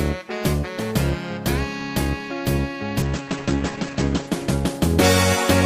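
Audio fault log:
3.02–5.35 s, call bitrate drop: the encoder gets starved of bits, so everything above 8 kHz vanishes and the sound turns rough and watery, bottoming out for about a second.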